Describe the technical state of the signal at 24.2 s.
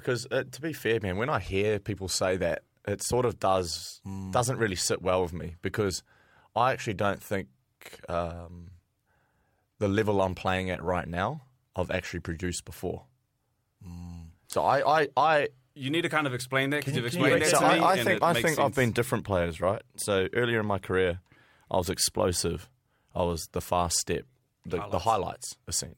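At 24.2 s the speech comes through intact, with no dropout, click, distortion or other technical fault to be heard.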